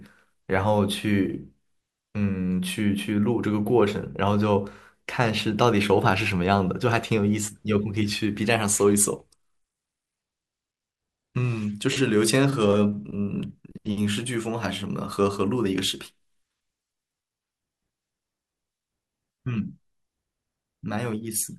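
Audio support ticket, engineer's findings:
Speech dulls and turns gritty, 9.17 to 13.12 s. Bluetooth SBC bit pool drop on a congested link. Top sub-bands starved, rest coarsely quantised. Fits a pool falling from 31 to 16, near 110 kbps.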